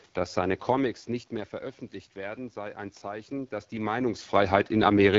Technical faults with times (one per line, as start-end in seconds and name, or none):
0.00-5.18 AMR wideband (HD Voice) codec
2.13-4.01 automatic gain rising